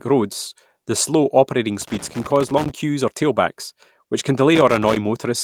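From 1.81 to 2.71 s, and again from 4.55 to 4.97 s, irregular bursts of scratchy crackle break into the speech: loose connector crackle, from a worn contact chopping the signal as it makes and breaks. Inside the first burst, from 1.91 to 2.01 s, the speech turns briefly rough and noisy with no gap. This is a lost packet rebuilt from error correction, with about 60 ms played from lower-quality backup copies, which fits three lost packets.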